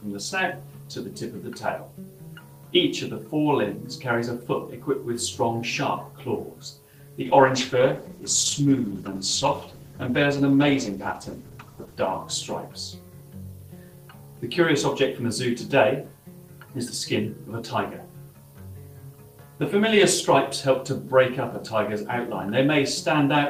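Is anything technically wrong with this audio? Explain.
Yes. From 7.22 to 13.33 s there is a call bitrate drop: the encoder's rate falls from 32 to 13 kbps, bottoming out for 4.8 s. Coarser coding and lost highs make the sound rough, watery or muffled but unbroken, unlike packet loss's gaps.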